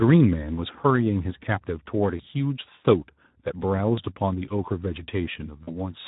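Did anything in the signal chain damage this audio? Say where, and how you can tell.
Yes. The codec stage is the main culprit: the whole clip has been through the Speex codec at a low setting. Its CELP model has too few bits to describe the excitation, so the speech takes on a plainly audible noisy, hoarse roughness from start to finish, which fits a bitrate around 11 kbps. This is coding damage, not a fault in the analogue wiring or the converters.

The network stage adds VoIP packet loss concealed by the speech codec, at 0.55 to 0.60 s, 2.17 to 2.21 s, 3.95 to 4.01 s and 5.63 to 5.80 s. Each of the first three gaps sounds like about one 20 ms frame going missing, and the last like two frames, about 40 ms. The decoder covers each gap by repeating its last pitch and filter at falling gain, so the speech smears into a brief buzzy or coloured fade and stays weak or distorted for a moment after packets resume.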